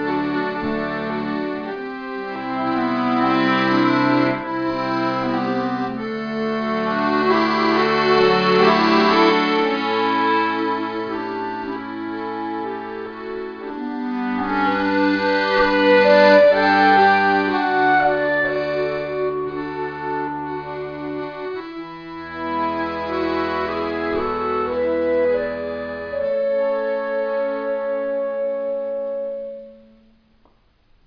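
There are no technical faults to describe in this audio.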